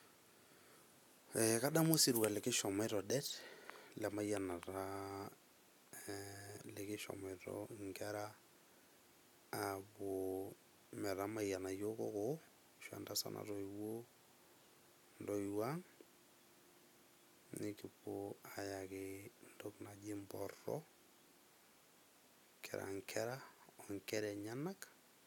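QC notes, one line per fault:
Nothing to flag on this speech clip, so there's no fault line to log.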